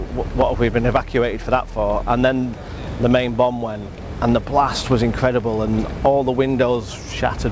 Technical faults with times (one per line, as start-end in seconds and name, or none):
none